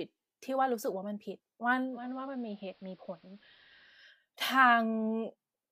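From 1.84 to 4.10 s the receiver's digital radio blending to analogue switches to the AM broadcast over 275 ms, dropping level about 4 dB and adding hiss.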